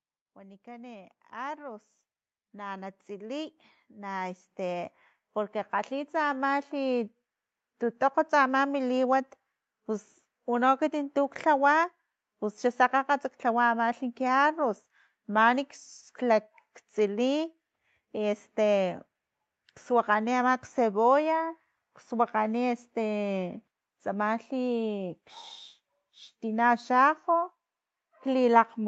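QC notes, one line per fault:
0.34–1.88 s, 2.51–4.96 s and 5.70–6.70 s: automatic gain rising. The level climbs gradually each time, by about 6 dB, about 9 dB and about 4 dB. The gain control heard the input as too quiet and turned it up, so voice and background swell together.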